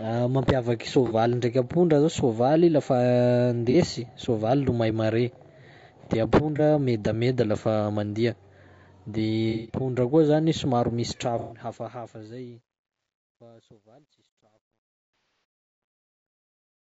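The speech has a rough, grainy texture throughout, with noise filling the gaps between voice harmonics and a top band that sounds thin and synthetic. This is plainly audible damage from what is likely low-delay AAC compression (AAC-ELD) at a low bitrate, consistent with about 32 kbps. Its short frames resolve pitch harmonics poorly, so the encoder spends its limited bits coarsely and fills in the upper band.

Brief smeared, phasey blips of about 30 ms occur at 1.07 s, 3.71 s and 6.56 s. These are AAC frame loss with concealment: a single frame went missing each time, and the decoder patched it from the last good spectrum. Longer losses give a noisy, wobbly stretch from 9.50 to 9.79 s, about 180 ms, and another from 11.39 to 11.59 s, about 120 ms. Both fit several consecutive frames lost. From 15.14 to 15.44 s the smearing comes in scattered patches over about 300 ms, the longest run around a tenth of a second.

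From 11.00 s the level fades out smoothly toward 16.9 s, but as it drops the sound grows gritty. From 13.0 s to the end the grit is at its worst. This is truncation distortion on a fade. The fade was computed at only about 11 bits with no dither, so near the bottom of its range the waveform collapses into a few coarse steps.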